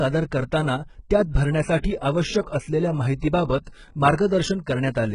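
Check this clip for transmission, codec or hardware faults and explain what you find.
One codec fault runs through the whole speech clip: HE-AAC compression, likely at a very low bitrate near 12 kbps. Only the lower band is truly coded, and the treble is rebuilt by spectral band replication, so s sounds turn gritty and metallic, with nothing above 11.1 kHz.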